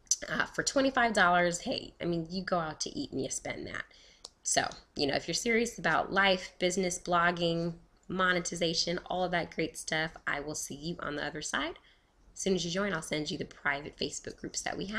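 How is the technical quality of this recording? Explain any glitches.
No glitches or faults heard.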